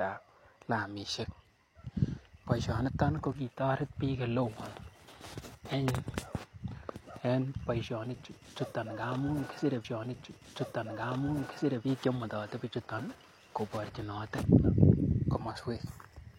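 At 9.80 s there's a stream segment repeated: the player queued the same chunk of speech twice, so about 2.0 s of programme plays over again until 11.80 s, with a small blip right where it jumps back to the earlier point.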